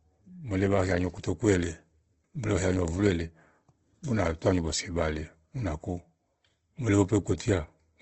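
Throughout the speech the sound is rough and grainy, with a noisy texture and nothing above about 8.2 kHz. This is likely Opus compression in its CELT music mode, filling starved bands with noise, consistent with a low bitrate near 16 kbps.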